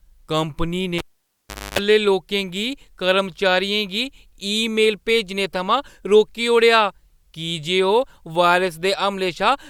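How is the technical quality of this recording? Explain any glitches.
One glitch interrupts the speech. From 0.98 to 1.79 s, a cable pulled and plugged in: pop, 0.75 s dropout, 0.27 s of 50 Hz buzz from tip-only contact, then pop.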